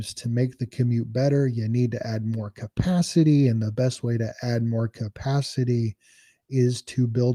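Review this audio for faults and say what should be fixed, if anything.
No faults turn up in this audio, so nothing needs to be fixed.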